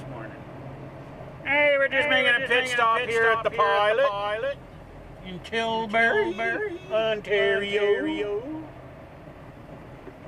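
Throughout the clip a doubled audio track sounds: a full-band copy trails the original by about half a second, roughly 5 dB quieter, with no decay or room colour. The likely cause is a second capture path or misaligned edit. The waveform and spectrogram show each event repeated, slightly fainter, half a second later.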